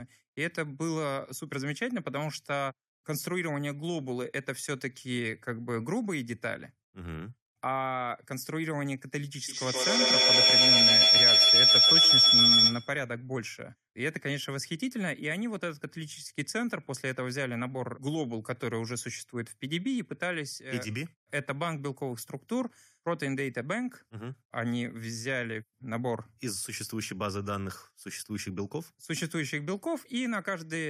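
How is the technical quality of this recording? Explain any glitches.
The recording has one real problem, a feedback howl from 9.48 to 13.08 s. It sounds like two devices in the same room on one call: the sound goes out a loudspeaker, back into a microphone, and gets louder on each trip instead of dying away. It narrows to a tone somewhere around 5 kHz, with the loop repeating roughly every 150 ms, and peaks about 11 dB above the speech before the loop gets broken.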